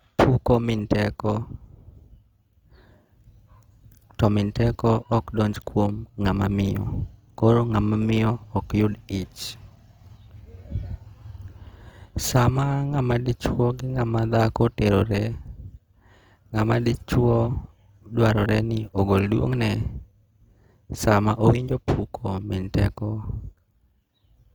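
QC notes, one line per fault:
throughout: Opus compression; speech sounds rough and grainy where starved bands are noise-filled, with content reaching 20.3 kHz, fitting a likely CELT-mode encode near 24 kbps.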